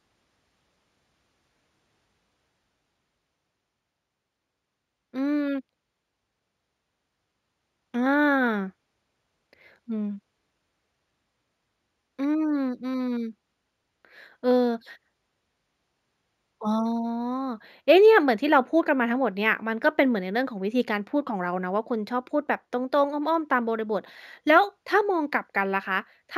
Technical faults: imaging from linear upsampling

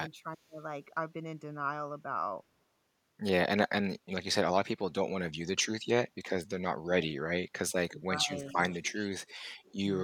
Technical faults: speech suppressed in double talk; echo leak

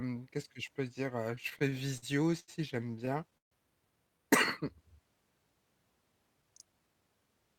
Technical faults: repeated stalls (stutter); jitter buffer speed-up

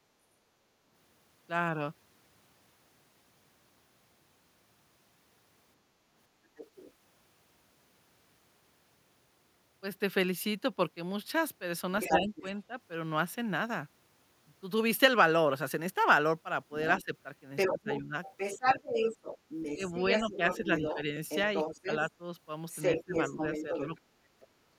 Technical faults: other side's voice leaking through; speech suppressed in double talk

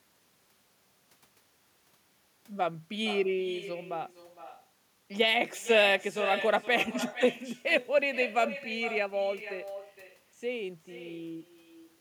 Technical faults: echo with no canceller

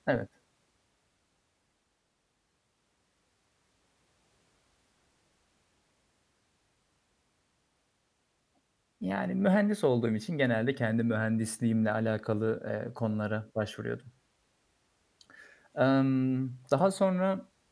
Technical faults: none

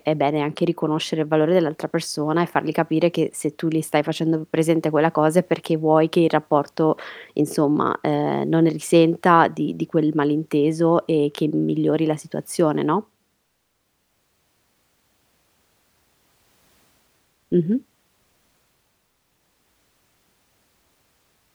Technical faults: none

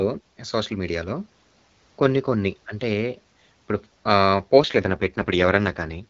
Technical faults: AMR rate drop

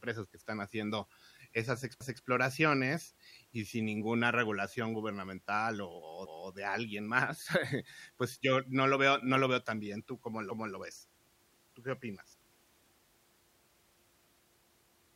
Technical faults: overlapping chunks

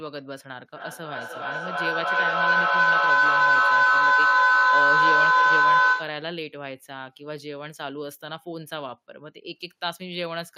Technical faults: feedback howl

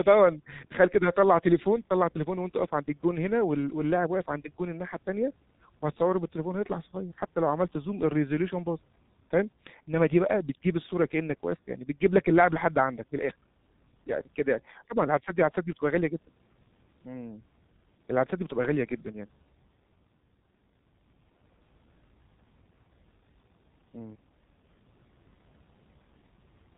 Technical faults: G.723.1 codec

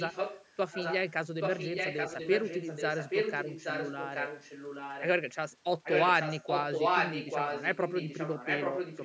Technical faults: echo leak

